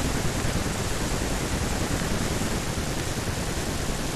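Speech recording with two kinds of fault. A loud pop, a double one, hits between 0.40 and 0.52 s, and single pops land at 2.00 and 3.00 s, each peaking roughly 15 dB above the speech, which carries on underneath. These sharp impulses are likely voltage steps from a connector, switch, static discharge or driver glitch, shaped into a brief thump by the downstream circuitry. A dropped buffer (overrun) shows up at 0.88 s and again at 2.60 s as an abrupt jump forward in the speech, with no gap of silence. Around 40 ms of audio is missing at each point. The likely cause is the capture software failing to read its samples before the hardware overwrote them, so the audio on either side of the lost block is spliced directly together.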